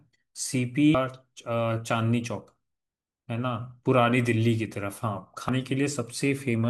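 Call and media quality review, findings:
Damaged data in a compressed stream, 0.94 s: brief blip, under 5 ms. Probable component: decoder input. Corrupt bytes in a compressed frame; decoder misreads the frame, loses sync, resumes at next valid header.

Damaged data in a compressed stream, 5.49 to 5.52 s: short glitch, about 30 ms. Same component and mechanism: corrupted frame data breaks decoding until the decoder re-locks on the following frame header.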